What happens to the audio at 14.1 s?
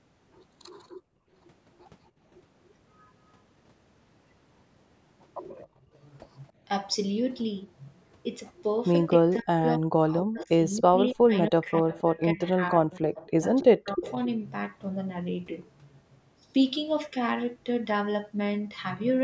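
With both sides of the call likely talking at once, the echo canceller could not tell the talker from the loudspeaker echo and turned everything down. From 13.34 to 14.05 s, this speech suppressed in double talk dips the voice, around 0.4 s in all, by about 40 dB at its deepest. Right after, from 14.05 to 14.13 s, an echo leak follows, probably from a loudspeaker on one side whose canceller missed part of the pickup. A faint copy of the voice, delayed by 271 ms and about 20 dB below the speech, comes back as a brief scrap.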